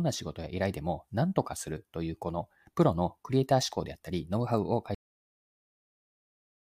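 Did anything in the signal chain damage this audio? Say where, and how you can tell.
Yes. The speech has a cut-off end at 4.95 s. The sound stops mid-utterance and falls straight to digital silence for the rest of the clip, with no natural decay or room tail. The fault sits at the storage or write stage: the final buffers were never flushed to the file, so the recording simply ends. On the waveform, the envelope drops vertically to a flat line. On a spectrogram, every band goes dark at the same instant.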